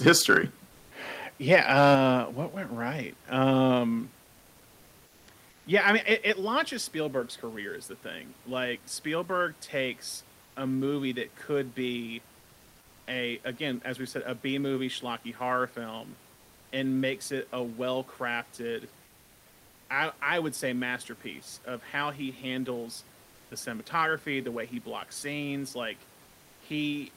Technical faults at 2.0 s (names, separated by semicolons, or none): microphone overload; microphone volume stepped down